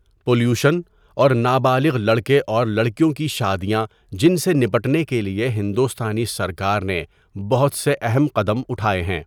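Hard clipping flattens peaks at 1.21–1.26 s and 4.25–4.28 s (before "سے نپٹنے کے لئے"), about 1 and 2 dB over, giving sharp crackle rather than soft saturation's rounded warmth.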